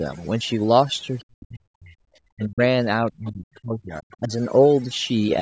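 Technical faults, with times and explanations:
Throughout: overdone noise removal. The noise reducer was pushed far too hard. The background drops, with little twinkling specks where individual frequency bands flicker on and off around its noise estimate. The quieter parts of the speech get pulled down with the noise. The lowest bass is trimmed by the call's microphone high-pass, and nothing sits above 8 kHz, which is normal for that path.
1.22–1.95 s, 2.32–2.61 s, 3.01–4.31 s: speech suppressed in double talk. The talker's level drops sharply in each of these stretches. The dips go as deep as roughly 40 dB in the first two and around 30 dB in the third, and the speech is turned down across most of each window. This is likely the echo canceller failing to separate the talker from loudspeaker echo while both sides spoke, so it turned everything down together.
3.27–3.31 s and 3.55–3.60 s: other side's voice leaking through. 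Two brief scraps of a second voice slip in under the talker during the third suppressed stretch. The first sits around 25 dB below the speech and the second is fainter, at about 35 dB down. These are likely residual loudspeaker echo that the canceller didn't fully remove from the microphone.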